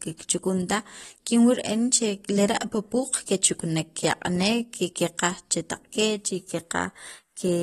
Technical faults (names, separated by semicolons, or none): AAC compression